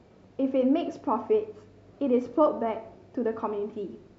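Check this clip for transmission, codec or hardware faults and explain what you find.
Nothing wrong turned up here; the transmission and hardware side of this recording gives no cause for concern.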